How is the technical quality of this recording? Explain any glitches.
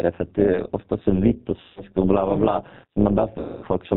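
Quality is poor. Three faults stand out: plainly audible low-bitrate codec damage, a constant metallic buzz, and two dropouts filled in by the decoder.

The G.729 codec damage runs through the whole clip and is plainly audible. The speech sounds thin and slightly synthetic. Nothing above 4 kHz survives. The decoder rebuilds each 10 ms frame from a vocal tract filter, a pitch predictor and a few pulses. That sparse model causes the roughness. It points to an 8 kbit/s G.729A stream.

Overlap-add ripple is also present throughout. The audio was split into windowed frames and rejoined with an overlap that does not sum to a steady gain. So the level swings by about 11 dB once per frame, at roughly 150 times a second. It is heard as a metallic buzz with extra tones around the voice.

VoIP packet loss concealed by the speech codec occurs twice. The first is from 1.60 to 1.83 s, with about 160 ms of audio missing. 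The second is from 3.39 to 3.66 s, with about 240 ms missing. In each gap the decoder repeats its last pitch and filter while lowering the gain. The sound smears into a buzzy, fading tone. Each frame builds on the one before, so the speech stays weak and distorted briefly after real audio returns.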